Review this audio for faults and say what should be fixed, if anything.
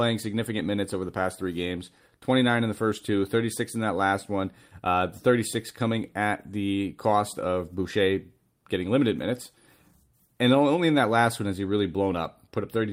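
Nothing here needs fixing, since no technical faults turn up anywhere in the recording.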